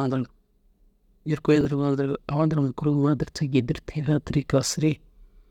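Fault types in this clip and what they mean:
Chunks out of order: around 1.61 to 1.65 s, one 10 ms slice of the speech turns up three chunks late and plays after the pieces that should follow it. Nothing's missing, but you get a quick scrambled blip with three hard joins.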